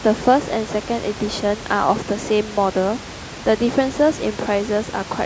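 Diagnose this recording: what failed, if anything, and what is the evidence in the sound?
No technical fault detected.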